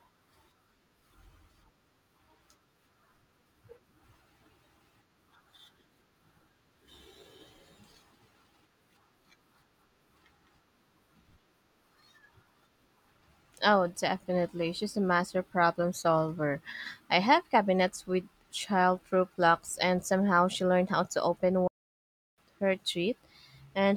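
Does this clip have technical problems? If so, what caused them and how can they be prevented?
Yes. There is a playback stall near the end of the speech. At 21.67 s the audio cuts to silence in mid-flow. It stays silent for about 0.7 s and resumes at 22.38 s. The likely cause is that the player ran out of buffered data, or its audio thread was blocked, so nothing reached the output until it recovered. A larger playback buffer and a high-priority audio thread that never waits on slow work would prevent it.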